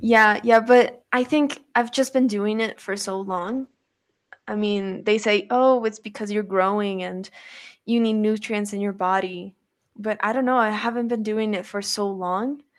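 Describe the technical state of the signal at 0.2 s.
At 0.2 s the speech shows microphone overload, spanning 0.15 to 0.25 s. Peaks are flattened with a harsh, crackling edge. The likely cause is input gain set about 3 dB too hot, driving a few percent of samples into the converter's ceiling.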